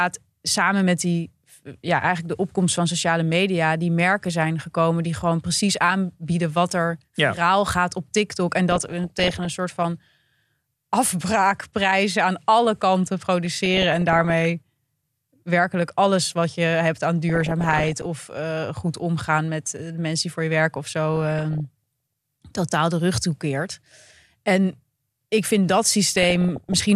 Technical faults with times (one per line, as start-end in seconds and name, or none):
8.71-9.48 DAB burbling
13.45-14.45 DAB burbling
17.29-18.06 DAB burbling
21.14-21.60 DAB burbling
26.15-26.74 DAB burbling